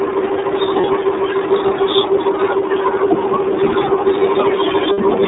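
The whole recording carries the sound of the iLBC codec. The speech sits in a narrow telephone band of roughly 250 Hz to 3.7 kHz, with nothing above it, and the coding damage is plainly audible as a rough, slightly synthetic edge on the voice. Each block of excitation is coded on its own rather than predicted from the previous one, and the texture fits iLBC's 30 ms frame mode at about 13 kbps.

From 0.81 to 0.86 s there are lost iLBC frames. A gap of about 30 ms, one frame's worth, is filled by the decoder repeating the last pitch cycle with added noise, heard as a brief held, buzzy vowel. At 4.92 to 4.99 s a longer loss of about 60 ms produces the same sustained, breathy tone, fading slightly toward its end. In both cases the voice snaps back cleanly right after, since the next frame decodes independently.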